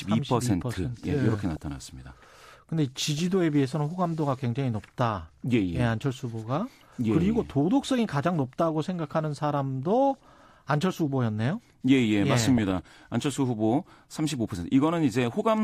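At 1.56 s, 3.18 to 3.34 s, 10.14 to 10.34 s and 12.58 to 12.94 s the speech is overlaid with DAB burbling. Weak reception leaves a small fraction of a percent of bits wrong after error correction: corrupted MP2 samples put short blips of noise in single sub-bands, and corrupted scale factors make individual sub-bands leap in level for up to a frame. The result is burbling, longest and densest in the final burst.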